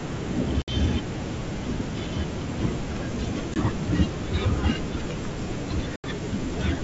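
Packet loss on an ADPCM call strikes three times: about 60 ms missing at 0.62–0.74 s, a single packet's 20 ms at 3.54–3.57 s, and about 80 ms at 5.96–6.05 s. Each gap is filled with silence, leaving the receiving G.722 decoder's predictor and step size out of step with the sender's. The speech cuts to a hard-edged hole, then returns briefly with slight distortion before settling.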